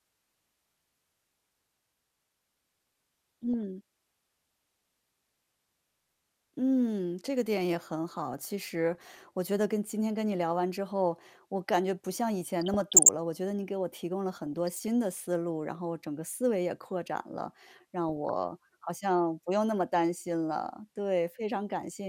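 The speech carries DAB burbling in five bursts: 3.43 to 3.54 s, 8.95 to 9.24 s, 12.61 to 13.09 s, 14.37 to 14.88 s, and 18.09 to 18.29 s. Weak reception lets bit errors, a fraction of a percent, slip past error correction into the MP2 data. Corrupted samples put short blips of noise in single sub-bands, and corrupted scale factors make sub-bands jump in level for up to a frame. Each burst adds burbling over the speech.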